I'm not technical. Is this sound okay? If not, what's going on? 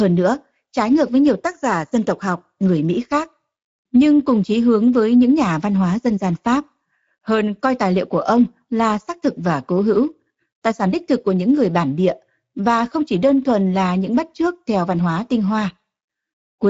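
No. The whole clip has passed through the Speex codec, an older speech format used in internet calls and game chat. It squeezes speech hard to save data, and here the damage is plainly audible from start to finish. The speech sounds rough and hoarse. Nothing is left above about 7.7 kHz, so the crisp top end is missing.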